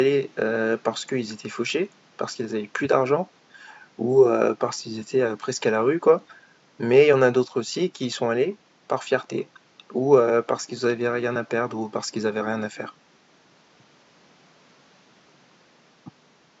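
No technical faults can be heard anywhere in the recording. A low room noise from the space around the microphone sits about 36 dB below the speech and belongs to the recording itself.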